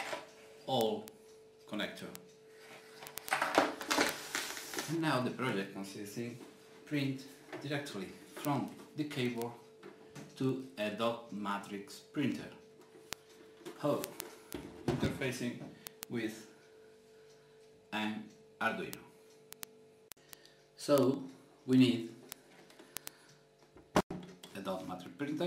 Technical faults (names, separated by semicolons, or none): word clock ticks